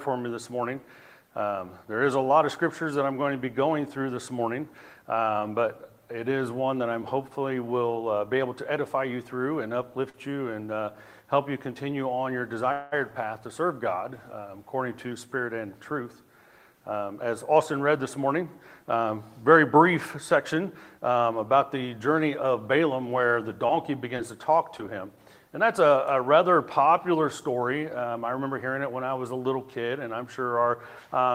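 At 10.09 to 10.16 s the sound hangs on one moment for about 45 ms, with a faint buzzy smear. This is a short stall from a late packet: the jitter buffer emptied, so the receiver stretched the last sound until the packet arrived, and nothing was lost. At 12.72 to 12.94 s a longer hold of about 197 ms turns into a fading buzz that never drops to silence. It then resumes where it stopped. This call audio freeze likely came from packets held up in transit, which drained the buffer, and no audio is missing. From 16.51 to 16.93 s the sound rushes at about 110% speed while its pitch stays the same. It rushes again, more mildly, at 104% from 24.04 to 25.17 s and at 103% from 27.08 to 28.45 s. This is jitter buffer speed-up: the receiver trimmed roughly 50 ms each time, cutting tiny pitch-period slices to shrink an overfull buffer. Between 23.67 and 24.90 s there are about four brief ticks or hiccups, none longer than roughly 15 ms. 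These are scattered short gaps, where individual packets were lost and each hole was patched by continuing the preceding sound, with 60 ms of audio missing in total.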